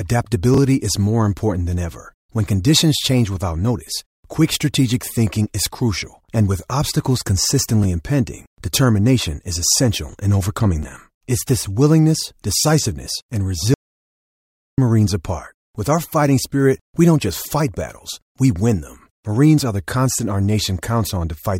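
Around 0.54 to 0.58 s, 7.83 to 7.85 s, 10.09 to 10.13 s and 10.83 to 10.85 s the speech briefly jumbles: chunks out of order. Blocks of about 10.7 ms play one to three positions late, after blocks that should follow them. Nothing is missing, but each swap creates three hard joins, heard as a quick garbled stutter.

From 13.74 to 14.78 s, about 1.04 s, the audio drops out to silence. The speech cuts off mid-flow and returns abruptly, with no room tone in between. Whatever was said during that second is gone. The likely cause is a momentary loss of the input signal, such as a dropped device or link, while recording continued.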